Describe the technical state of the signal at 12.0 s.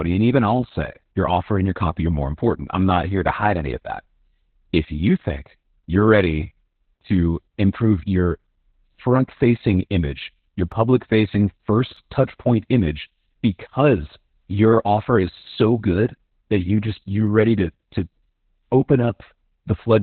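At 12.0 s the speech is under heavy Opus voice compression, as it is for the whole clip. The coder is working in its narrowband linear-prediction mode. Nothing sounds above about 4 kHz, so consonants lose their edge and the voice is muffled. The excitation is coded coarsely, which leaves a hoarse, slightly robotic grain. That degree of damage fits a very low bitrate, around 8 kbps.

Just before this point, at 11.97 s, there is a single sharp click. It falls right before "touch point image because". The likely cause is dropped samples, a tiny fraction of a millisecond lost from the stream. The waveform jumps straight from one value to a later one. Nothing audible goes missing. The step itself is heard as the click, a thin vertical line in the spectrum.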